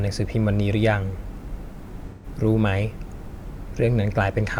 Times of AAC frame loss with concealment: 2.10-2.26

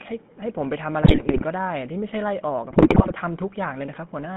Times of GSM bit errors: 1.02-1.45, 2.70-3.12

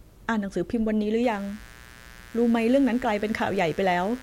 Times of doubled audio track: none

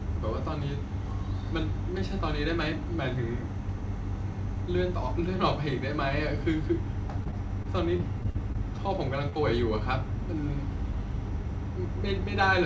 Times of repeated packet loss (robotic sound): 7.24-8.79

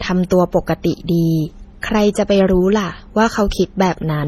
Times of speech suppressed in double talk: none

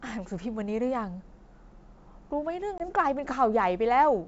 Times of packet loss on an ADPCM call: 2.78-2.89

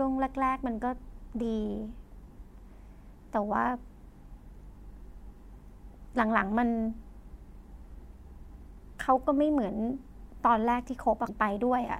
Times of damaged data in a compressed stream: 11.25-11.29

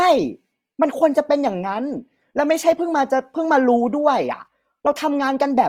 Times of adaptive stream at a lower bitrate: none

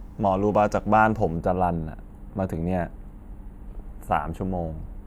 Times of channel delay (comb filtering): 1.37-5.06

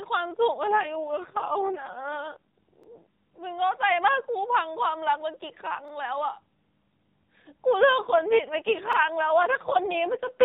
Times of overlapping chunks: 2.83-2.88, 5.88-5.93, 8.93-8.98

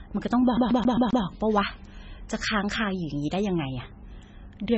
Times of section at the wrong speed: none

